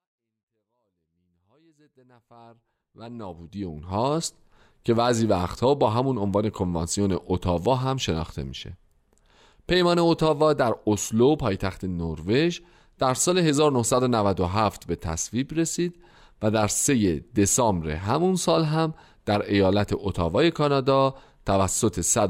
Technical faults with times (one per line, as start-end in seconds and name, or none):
none